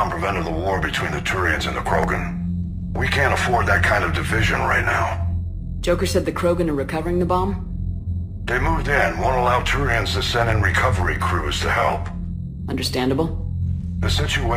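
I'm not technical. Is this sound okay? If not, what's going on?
Yes, no faults are audible.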